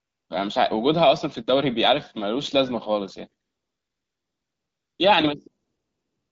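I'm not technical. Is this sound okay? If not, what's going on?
No. Three stretches use AMR comfort noise: from 0 to 0.29 s, from 3.43 to 4.99 s, and from 5.63 s to the end. In those moments the phone decided nobody was talking and stopped sending the real sound. The receiving end filled each gap with made-up background hiss. So the real room sound disappears and a smooth, even noise takes its place. You can hear it switch in and out at those times.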